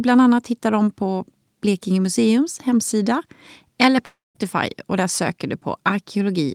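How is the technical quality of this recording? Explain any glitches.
The recording has one clear glitch, a long network dropout between 4.05 and 4.37 s in the speech. The stream likely stopped delivering audio for about 0.3 s, and the receiver tried to bridge the gap by continuing the last sound it had. That concealment is heard as a buzzy, fading continuation that gives way to roughly 0.19 s of near silence before the speech resumes. The portion that fell inside the gap never returns.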